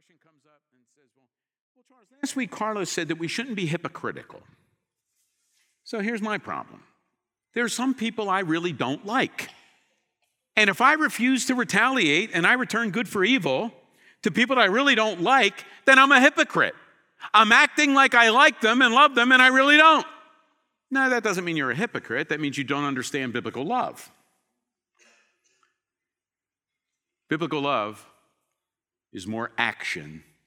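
From the very start until 2.23 s, the clip is in an audio dropout to a faint residue. The speech is already missing when the audio begins, and only a faint trace of sound remains, roughly 35 dB below the normal level. At 2.23 s the full signal returns abruptly rather than fading in. The likely cause is a loss of the wanted signal upstream while the path after the break stayed live and kept passing that low leak.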